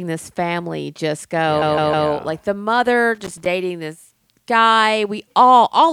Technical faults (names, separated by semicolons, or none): repeated frames; loose connector crackle